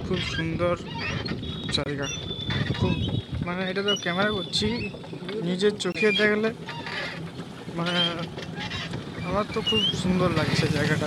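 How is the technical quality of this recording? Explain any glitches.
The recording has two short dropouts, both from corrupt frames being muted.

Corrupt frame muted, at 1.84 to 1.87 s and again at 5.92 to 5.96 s. Damaged bits in the compressed stream made the decoder reject a frame, and the player filled that slot with silence. Each gap lasts roughly 36 to 40 ms, which fits a single lost frame. The sound cuts out abruptly, leaving a brief hole, then resumes on time without any shift in timing.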